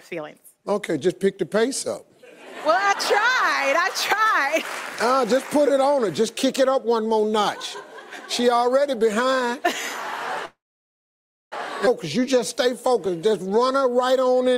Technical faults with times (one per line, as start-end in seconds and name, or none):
10.45-11.54 call audio freeze
11.86-11.88 skip ahead
12.19-14.55 jitter buffer slow-down